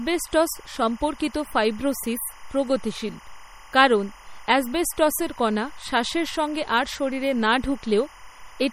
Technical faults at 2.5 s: timecode bleed; MP3 compression

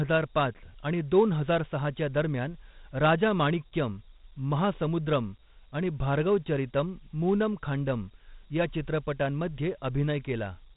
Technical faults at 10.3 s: Dialogic VOX ADPCM

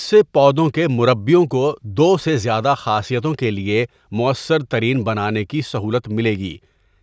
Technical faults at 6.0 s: none

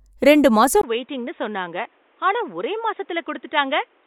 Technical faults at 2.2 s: input switched to a poorer device

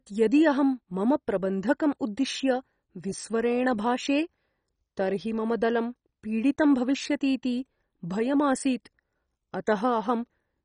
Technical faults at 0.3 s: MP2 compression

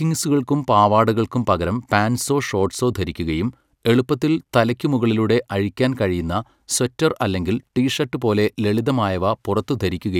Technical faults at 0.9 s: none

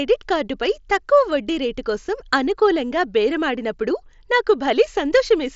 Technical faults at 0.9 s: none

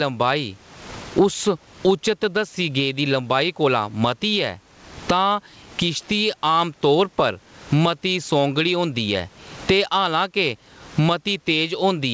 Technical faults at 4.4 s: gain pumping

